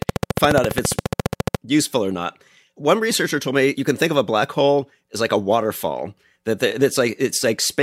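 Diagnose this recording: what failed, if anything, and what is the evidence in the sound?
From 0.02 s to 1.56 s a rapid, even ticking rides over the speech: a train of clicks at 14.4 per second, about twenty in all, each with the same sharp shape and peaking about 15 dB above the speech. It stops just before "useful or not". The steady rate and similar pulses point to the analogue wiring or interface stage, likely interference from nearby equipment or a faulty connection or power supply injecting a periodic pulse into the signal.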